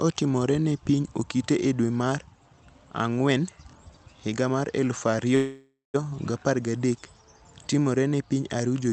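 Speech over a call path, audible as 8 kHz-limited Opus-style audio, shows a call audio freeze from 5.35 to 5.96 s, likely packets stalling until the jitter buffer emptied. The receiver stretches the last sound into a fading buzz or hiss, then about 0.19 s of silence, before speech resumes with nothing lost.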